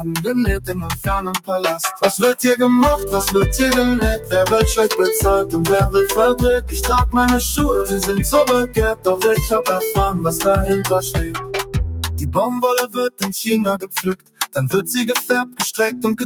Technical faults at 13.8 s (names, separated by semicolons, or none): noise suppressor applied to music or sounds; sound cut by the noise suppressor